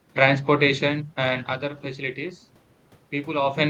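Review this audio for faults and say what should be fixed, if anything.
No faults; nothing needs fixing.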